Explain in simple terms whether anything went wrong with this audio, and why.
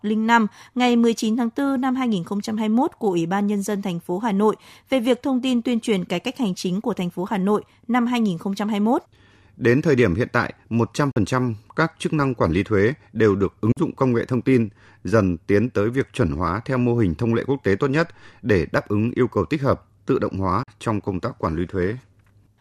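The speech briefly cuts to silence three times, each gap about 44 milliseconds long: at 11.11 to 11.17 s, right after "thời điểm hiện tại"; at 13.72 to 13.77 s, after "lý thuế đều được"; and at 20.63 to 20.68 s, after "tích hợp tự động". Each time the sound cuts out and comes back with a tiny piece missing. This is likely a Bluetooth dropout, where a few chunks of audio reached the headphones too late and were skipped, so the playback went quiet and then carried on.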